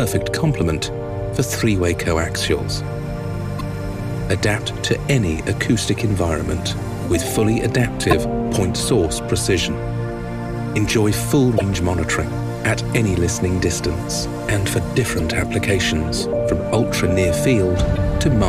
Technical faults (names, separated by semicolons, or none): damaged data in a compressed stream